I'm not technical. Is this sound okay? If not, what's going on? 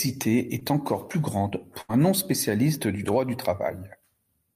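No. There are two dropouts, both typical of audio sent over a network.

At about 0.59 to 0.63 s, just before "encore plus grande", there is a short concealed packet loss. A tiny piece of the speech, about 20 ms, never arrived in time. The receiving end covered the hole by stretching out the sound that came just before it, then blended back into the real audio. You hear it as a very brief smear or wobble.

At about 1.81 to 1.91 s, right after "encore plus grande", there is a burst of packet loss. Several pieces in a row went missing, about 80 ms in total. The receiver again kept the last sound going, but faded it out as the gap continued, so you hear a short held buzz or hiss dying away. The speech then picks up a little further on, and whatever fell inside that gap is simply missing.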